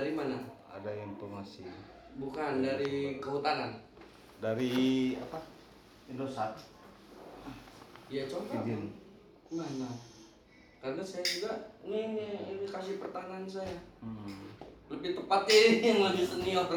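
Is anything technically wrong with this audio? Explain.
No, nothing technical stands out here, and the audio sounds fine the whole way.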